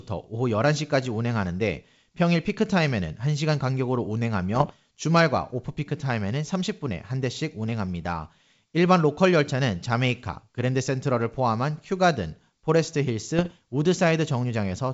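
Speech over a G.722 wideband link has bit errors on an ADPCM link at 4.55–4.71 s and 13.39–13.49 s. Each flipped bit knocks the decoder's step size and predictor off track, causing pops and rough bursts. These show as broadband vertical smears on a spectrogram and brief level jumps in the waveform, with the first burst denser.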